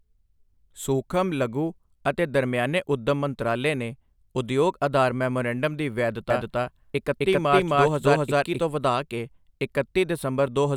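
It's a short speech recording, and from 6.30 s to 8.60 s it picks up a doubled audio track. A second full-band copy runs roughly a third of a second behind, at about the same level as the original, so everything in that stretch gets a hard, dry slap-back with no room decay. It cuts in and out abruptly at both ends, which most likely points to the audio being captured twice over a slower second path.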